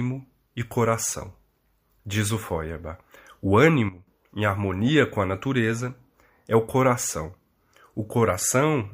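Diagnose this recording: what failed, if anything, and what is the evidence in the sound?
A sudden gain jump hits the speech at 3.89 s. The level drops by about 13 dB in a single step, with no fade. The background noise falls by the same amount at the same instant. At 4.08 s the level steps straight back up. Because the floor and the speech move together, the change sits in the digital path, not at the source. The likely cause is a gain setting applied in the driver or call processing without a ramp.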